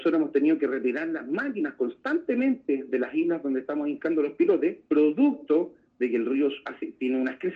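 No technical faults can be heard anywhere in the recording.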